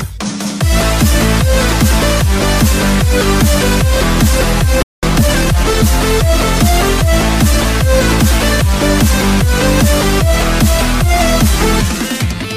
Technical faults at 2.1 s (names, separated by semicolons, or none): none